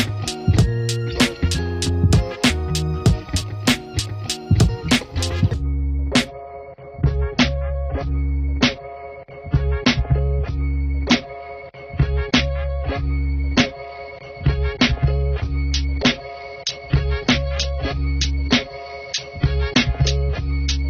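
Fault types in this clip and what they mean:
Adaptive stream at a lower bitrate: at about 6.28 s the stream drops to a cheaper version and stays there to the end, so everything above roughly 6.6 kHz vanishes and artefacts rise, consistent with falling from around 96 to 24 kbit/s AAC.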